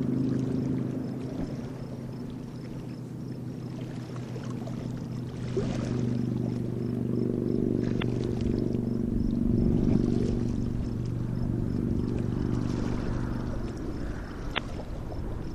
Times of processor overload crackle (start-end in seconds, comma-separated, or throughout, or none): none